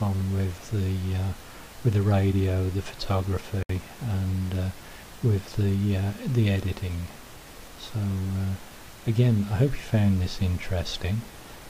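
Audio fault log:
3.63–3.69 s, gap at a join of encoded pieces: separately encoded pieces were butted together without trimming, so one run's padded final frame and the next run's start-up delay both stayed in. The result is a 67 ms gap in otherwise continuous sound, its edges smeared by the codec so the truly silent part is shorter, after which the sound resumes exactly where it broke off. The joins fall 10 s apart, so only this one lands here.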